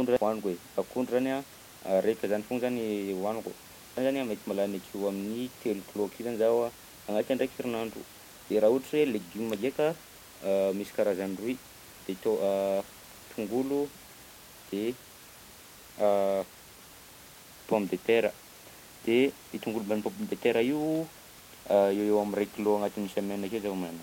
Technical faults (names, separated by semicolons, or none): damaged data in a compressed stream